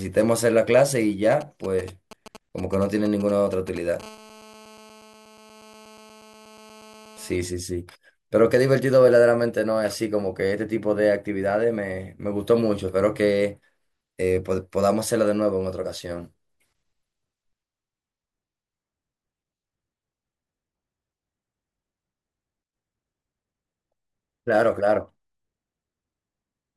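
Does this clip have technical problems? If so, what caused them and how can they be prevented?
Yes. From 1.32 to 4.02 s, GSM signalling bursts produce a galloping pattern of brief 217 Hz buzzes, roughly 15 dB below the speech. A nearby 2G phone is exchanging short control transmissions with the network, and the audio circuitry rectifies those radio pulses into sound. On a spectrogram they show as clustered vertical stripes with a harmonic comb, and the waveform shows spiky groups. Keeping phones well away from the recording equipment, or in flight mode, prevents this.

From 4.03 to 7.36 s, a steady GSM phone buzz sits about 25 dB below the speech. It is a hard, raspy 217 Hz tone with many harmonics. A phone is in a call and transmits in bursts 217 times a second, so the rectified pulses form an unbroken buzz. A spectrogram shows evenly spaced horizontal lines at multiples of 217 Hz, and the waveform carries a regular pulse train. 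Shielded cables and RF-filtered inputs also prevent it.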